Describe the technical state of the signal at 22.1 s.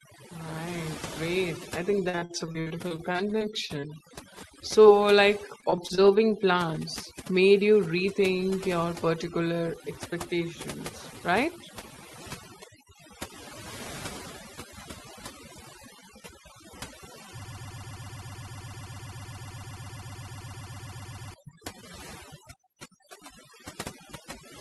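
At 22.1 s the speech sits over a near-silent background with twinkling specks: overdone noise removal, present throughout, gating quiet frequency bands, including softer parts of the voice.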